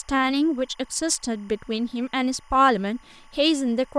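Timecode bleed runs under the speech for the whole clip, faint at roughly 35 dB down. Code from an adjacent line leaks in, flipping between tones near 1 and 2 kHz in a 25-frame rhythm, so it chirps and warbles rather than holding one steady whine.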